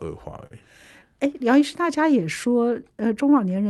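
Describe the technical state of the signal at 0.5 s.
Around 0.5 s there is a short stall from a late packet, running from 0.47 to 0.53 s. A packet arrived late and the jitter buffer ran dry. The receiver held the last sound for about 42 ms until the data came in, then resumed from the same point. Nothing is lost, but the sound at that moment hangs on too long, with a faint buzzy, flattened quality before normal flow returns.

This moment also sits inside clock drift between sender and receiver. The sender's clock runs roughly 3 percent slow. The jitter buffer keeps draining, so the receiver keeps stretching or repeating small pieces to fill the shortfall. That gives small timing hiccups at uneven intervals across the clip. The Opus call path, limited to about 12 kHz, carries all of this.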